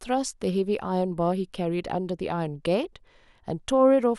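Listening to the speech recording, nothing stood out as a technical problem at any point.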